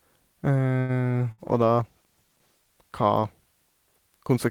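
At 0.79 s there is a short stall from a late packet, lasting until 0.94 s. A packet arrived late and the jitter buffer ran dry. The receiver held the last sound for about 93 ms instead of going silent. When the packet came, playback picked up from the same point. Nothing is lost. A sound simply drags on too long, with a faint buzz or dip, and everything after it lands slightly later.

At 1.32 s comes a burst of packet loss, ending at 1.41 s. Here the missing audio never arrived in time to play. The receiver filled about 65 ms by extending the last sound and fading it down, so it turns into a held buzz or a thinning hiss. Playback then resumes further along. About 60 ms of the speech is gone, skipped over rather than delayed.

From 1.46 s to 3.42 s there is a call bitrate drop. The bandwidth estimate fell, and the encoder cut its rate from 32 kbps to 17 kbps. It stayed at its lowest for about 1.1 s. 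With fewer bits, the speech is coded more coarsely. It sounds rougher and more watery, and duller at the top. Clarity returns as the rate climbs back.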